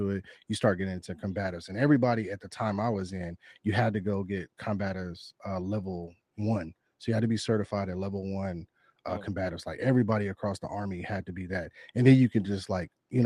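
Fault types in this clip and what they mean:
No fault types are present in this clip.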